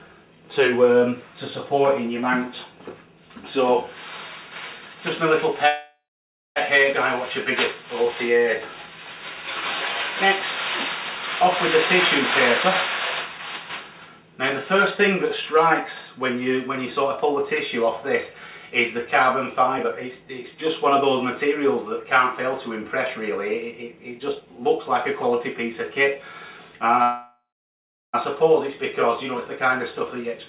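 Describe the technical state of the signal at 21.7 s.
At 21.7 s the signal is inside a jitter buffer speed-up running from 19.76 s to 22.05 s. The receiver's buffer held more audio than its target, so it trimmed short pitch-period-length pieces over and over to drain the excess, removing about a fifth of a second in total. Playback runs about 8% fast at unchanged pitch, giving a hurried feel, heard through the narrowband call path with nothing above 4 kHz.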